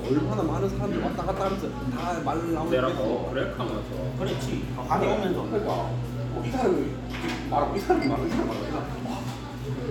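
No technical faults can be heard anywhere in the recording, and the signal stays intact throughout.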